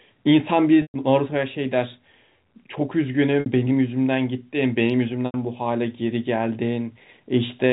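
Packet loss with pitch repetition strikes three times: at 0.82 s for 120 ms, at 3.40 s for 60 ms and at 5.26 s for 80 ms. Each time, a stretch of the audio stream went missing, and the receiver bridged it by looping the last pitch period while fading it over roughly 50 ms. This is heard as a briefly held, buzzy tone that decays, longest and most clearly into silence at 0.82 s, before the speech cross-fades back in. All of this arrives through narrowband G.711 telephone coding, which passes nothing above 4 kHz.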